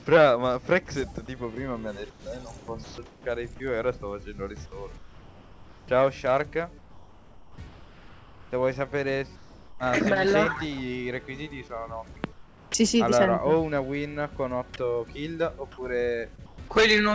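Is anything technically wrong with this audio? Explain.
Yes, there are three kinds of trouble here, all typical of a call that went through a codec like G.722 with nothing above 8 kHz.

Comfort noise in place of the background shows up six times: 2.10 to 3.26 s, 4.98 to 5.88 s, 6.78 to 8.52 s, 9.36 to 9.80 s, 12.32 to 12.74 s and 16.36 to 16.58 s. In the gaps the real room tone drops out and a flat, featureless hiss takes over, about 4 dB quieter where it's measurable. The background already sits about 25 to 27 dB below the loud parts. The likely cause is discontinuous transmission: the sender goes quiet when it hears nothing, and the receiver synthesises noise to fill the hole.

Onset clipped by the voice detector happens at 12.72 s, right where that comfort-noise stretch ends. The first 20 ms or so of the returning sound is missing, so it jumps in hard with no soft lead-in. The likely reason is that the detector reacted a beat late, so those opening moments were never sent and the receiver kept playing synthetic noise over them.

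Short concealed packet loss hits at 16.36 to 16.40 s. About 20 ms of audio didn't arrive in time, and the decoder patched it by stretching out the last bit of sound it had, then blending back into the real signal. You hear it as a tiny smear or wobble rather than a clean gap, tucked into the start of the last comfort-noise stretch.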